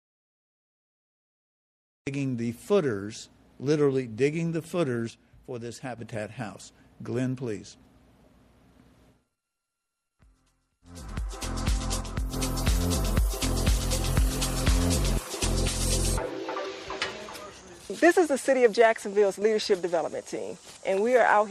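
From the first moment until 2.07 s there is nothing: an audio dropout to silence that is already under way when the clip begins. It is silence with no room tone, most likely because the input was lost or muted while the recorder kept writing silence. On a waveform it is a flat line, and on a spectrogram a dark block. Sound then starts abruptly, mid-flow rather than with a natural onset.

From 5.10 to 5.98 s, one channel drops out. The level falls suddenly by about 6 dB and comes back just as suddenly, the likely cause being a brief loss of one side of the stereo pair before the mono sum. The same drop happens again from 12.01 to 12.33 s and very briefly from 19.36 to 19.42 s. The waveform shows a clean step down in amplitude for each stretch, and the spectrogram dims uniformly across all frequencies without changing its pattern.

At 11.08 s, and again from 16.62 to 16.66 s, there is damaged data in a compressed stream. 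The decoder misreads corrupt frames and resynchronises on the next valid header. Each event is heard as a short chirp or blip. On a spectrogram each one shows as a thin vertical smear of broadband or oddly patterned energy. The waveform shows a brief glitch followed by a discontinuity.

Throughout the clip, MP3 compression damage is plainly audible, and the sound fits a low bitrate of about 64 kbps. The encoder was likely starved of bits, so it left weak frequency components flickering on and off. This gives a watery, swirling quality, metallic chirps on bright transients and smeared attacks. A spectrogram shows speckled, patchy energy.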